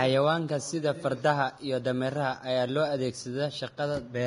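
Vorbis compression damage runs through the whole speech clip, from start to finish, and the likely cause is encoding at a low bitrate, with the heavy damage pointing to something around 30 kbps. At that rate the codec keeps a smooth outline of the spectrum with a coarsely quantised residue on top, and describes the treble so coarsely that its fine detail turns into noise of similar energy. The speech sounds hissy and grainy, with roughened tone and softened, smeared consonant attacks.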